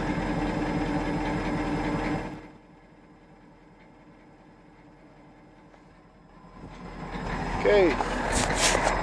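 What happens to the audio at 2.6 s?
Zipper noise runs from 2.14 to 2.60 s, ending right at the moment asked about. The level is being pulled down by roughly 25 dB, but instead of gliding, the gain jumps in 3 dB steps at around fifteen steps a second with no smoothing between them. Each abrupt jump puts a small discontinuity in the waveform, heard as a quick tick, so the fade carries a rapid ticking, zipping texture until it settles at the lower level.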